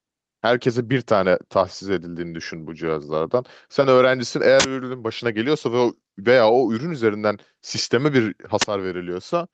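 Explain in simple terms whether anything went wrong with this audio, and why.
A couple of things went wrong here. All through the speech there's gain pumping, so everything sounds a bit squashed and uneven. The likely cause is the microphone level set far too high, with an automatic limiter yanking it back down on every loud moment.

There are also two uninitialised buffer bursts, short harsh blasts of digital noise from 4.60 to 4.64 s and from 8.62 to 8.64 s. They happen when the system plays a chunk of audio memory before any real sound has been written into it, so leftover junk comes out as noise. The first lasts about 46 ms and the second about 23 ms, which fits blocks of 2048 and 1024 samples.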